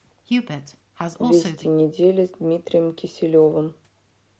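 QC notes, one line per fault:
No faults heard; content tops out near 8 kHz.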